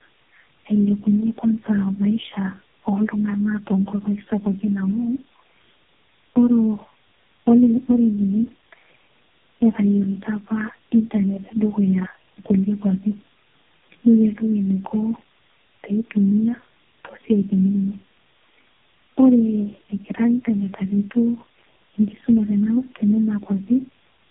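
Tandem speech coding runs throughout this speech clip. Three successive low-rate narrowband codec passes, likely AMR-NB, compound into rough, warbly, muffled audio with nothing above 3.7 kHz.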